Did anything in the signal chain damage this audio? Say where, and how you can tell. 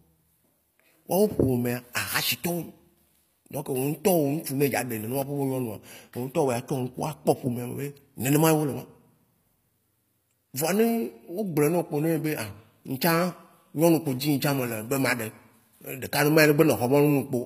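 Yes, at the codec. Throughout the speech, nothing passes 15.5 kHz and s sounds turn gritty. Likely HE-AAC compression, rebuilding treble from copied lower bands.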